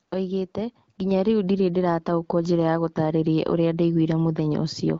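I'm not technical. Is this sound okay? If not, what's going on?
No. Two things go wrong in this speech clip.

The first is AMR comfort noise, at 0.07 to 0.11 s and again at 0.95 to 0.97 s, just before "rĩu ndĩrĩ ndĩrataũkwo njĩra". For those brief moments the phone decided nobody was talking and stopped sending the real sound. The receiving end filled the gap with a smooth, artificial hiss. Unlike a dropout, the line doesn't go dead. The real background is briefly swapped for steady fake noise.

The second is the microphone volume stepping up, at 1.11 s, again right before "rĩu ndĩrĩ ndĩrataũkwo njĩra". The calling software judged the microphone too quiet and turned it up in a single jump, so the voice and the room behind it suddenly get louder together. A fade in the recording would change more gradually. This is one abrupt step that stays at the new level.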